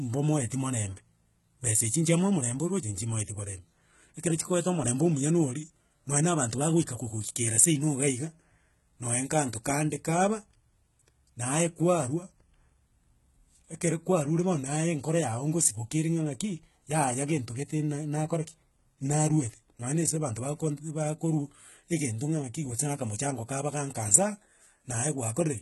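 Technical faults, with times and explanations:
Throughout, HE-AAC compression: the speech is heavily damaged, with gritty, lispy s sounds, as the treble is likely rebuilt from copied lower bands at a bitrate near 16 kbps. A spectrogram shows smeared, repeated-looking upper bands and a hard ceiling at 11.8 kHz.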